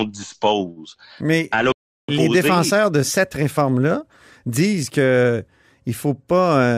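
At 1.72 s the speech cuts out mid-flow and the output falls completely silent for about 0.36 s, resuming at 2.09 s. This is a playback stall. The player was likely starved of data, or its output thread was briefly blocked, so nothing reached the output until it recovered.

From 2.09 s to 5.09 s the speech runs hurried, about 1.1 times normal speed, yet its pitch stays where it was. This is time-compressed catch-up. Having fallen behind during the stall, the player works off its backlog by snipping out short slices of audio and cross-fading across the joins. That shortens the material without changing pitch, which is why the speech sounds hurried over those three seconds.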